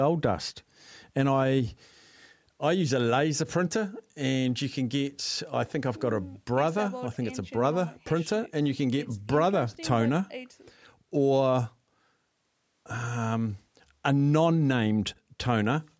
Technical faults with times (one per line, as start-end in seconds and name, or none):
none